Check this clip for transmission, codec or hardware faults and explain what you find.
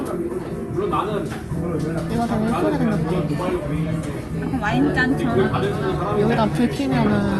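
Nothing stood out on listening to these sounds as they came through the call path.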